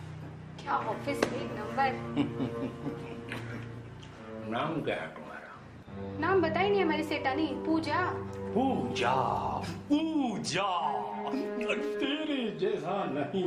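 No technical faults can be heard anywhere in this audio; the signal stays continuous throughout.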